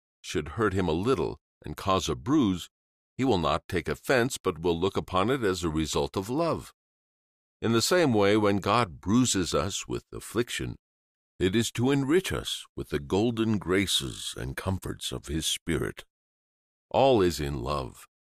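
Nothing in the recording stood out as a technical problem on listening.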